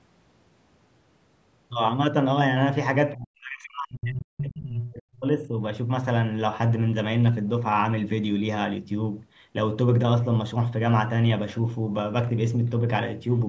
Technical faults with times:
3.15-5.54 speech suppressed in double talk
3.64-3.69 other side's voice leaking through

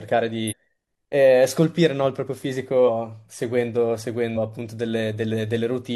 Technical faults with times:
0.47-0.53 compressed frames skipped
2.84-2.89 compressed frames skipped
4.32-4.37 compressed frames skipped

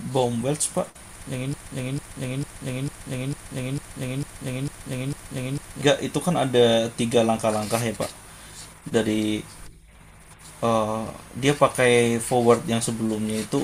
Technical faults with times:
1.54-5.81 broken-record loop

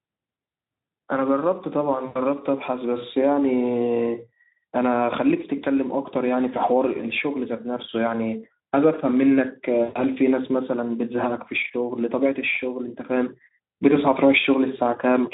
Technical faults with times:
2.05-2.19 VoIP packet loss concealed by the speech codec
9.83-10.02 VoIP packet loss concealed by the speech codec

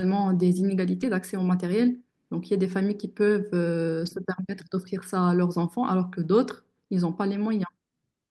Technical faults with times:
1.01-1.03 lost packet rebuilt from error correction
4.05-4.11 lost packet rebuilt from error correction
6.23 lost packet rebuilt from error correction

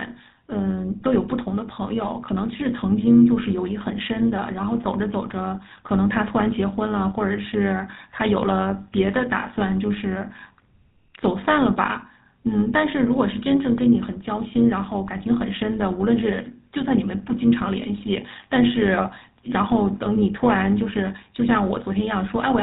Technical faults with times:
0.00-22.63 overlap-add ripple
0.00-22.63 GSM full-rate codec

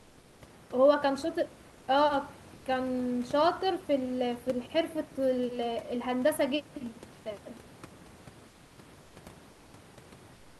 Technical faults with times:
0.00-0.41 comfort noise in place of the background
1.67-1.87 comfort noise in place of the background
8.49-9.15 comfort noise in place of the background
9.51-9.73 comfort noise in place of the background
10.35-10.60 comfort noise in place of the background

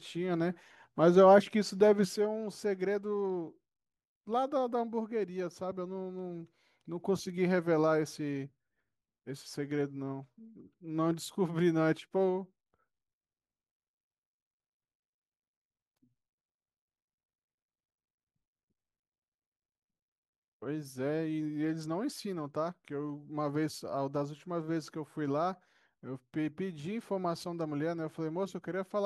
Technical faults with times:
2.16-29.06 one channel drops out

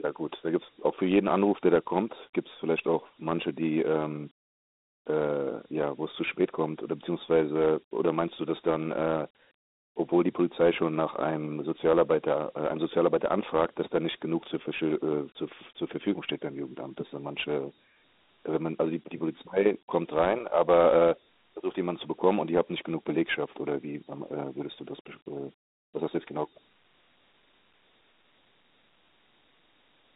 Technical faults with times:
0.00-30.16 Dialogic VOX ADPCM

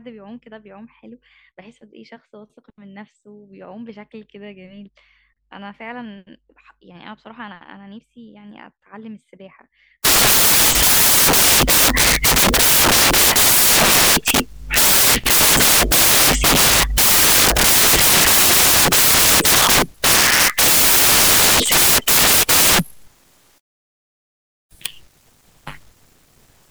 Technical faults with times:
10.05-26.71 samples built from the wrong bytes

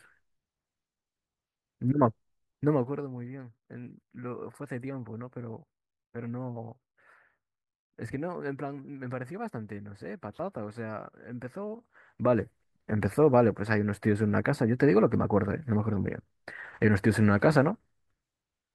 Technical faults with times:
none

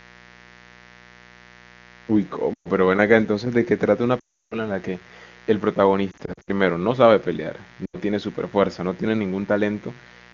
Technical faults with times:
0.00-10.34 mains buzz
2.54-2.68 lost AMR speech frames
4.19-4.55 lost AMR speech frames
6.11-6.50 lost AMR speech frames
7.86-7.96 lost AMR speech frames

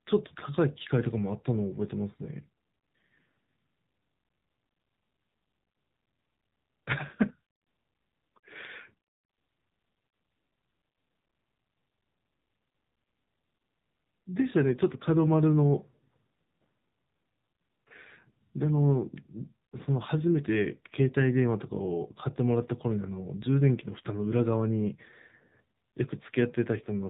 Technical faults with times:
0.00-27.09 AMR narrowband mobile codec

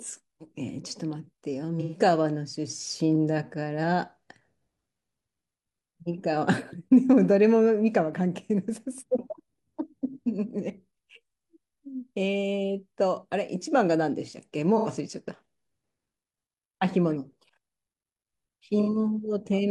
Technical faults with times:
1.80-2.00 AAC frame loss with concealment
14.77-14.88 AAC frame loss with concealment
18.82-18.88 AAC frame loss with concealment

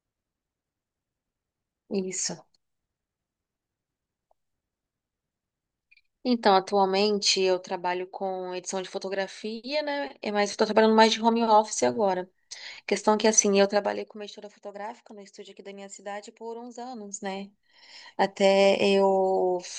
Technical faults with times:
7.31-7.83 zipper noise
10.10-10.91 zipper noise
13.61-14.37 zipper noise
16.72-17.60 zipper noise

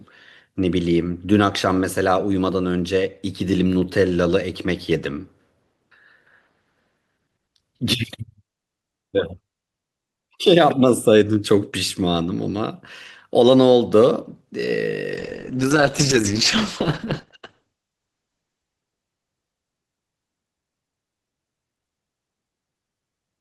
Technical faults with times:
15.19-20.35 call bitrate drop

